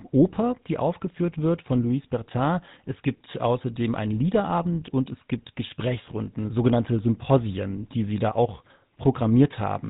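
From start to finish the speech has a buzzy, gravelly roughness with nothing above 4 kHz, the sound of the GSM full-rate codec at 13 kbps. That codec models the vocal tract and drives it with sparse, regularly spaced pulses, so the fine detail of the excitation is lost and a coarse texture is left behind.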